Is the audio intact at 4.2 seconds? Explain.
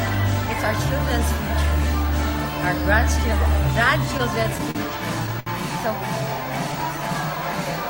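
No. Repeated stalls (stutter) run from 4.17 to 4.77 s. Packets arrived late, so the jitter buffer emptied four times. The receiver stretched the last sound to fill about 74 ms, with the longest hold 39 ms. Nothing is lost, but the audio drags and stutters. Video or display buzz is also present. A display signal couples in as a 50 Hz field-rate buzz with hash above it and a 15.6 kHz line tone, roughly 15 dB below the signal.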